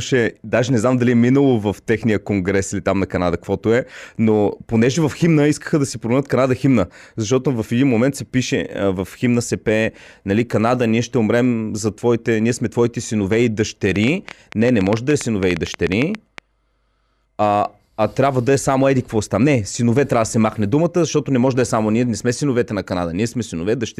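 Speech, with a train of clicks running from 13.96 to 16.39 s, just after "сме твоите синове и". About twenty similar pops arrive at roughly 9 per second, unevenly spaced, sitting about 10 dB above the speech, likely from interference or a faulty connection or power supply.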